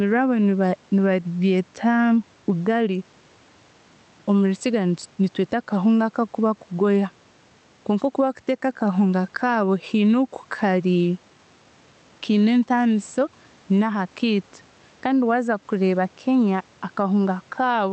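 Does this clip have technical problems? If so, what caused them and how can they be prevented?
Yes. Gain pumping runs through the whole speech clip: the gain swings by around 10 dB as each loud syllable arrives. This is likely caused by input gain set far too high, with a fast limiter or compressor repeatedly clamping it down, which squashes loud and soft passages toward the same level. Setting the microphone gain so peaks sit comfortably below clipping, and relaxing or disabling the automatic limiter, prevents it.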